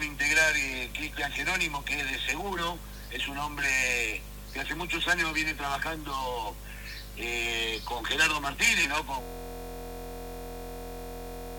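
At 9.22 s the audio locks into a system hang loop that runs to the end: a 23.22 ms slice repeats exactly, giving a steady buzz at 43.1 Hz. That fits a 1024-sample buffer replayed after a freeze. Unlike a stutter, the buzz never varies.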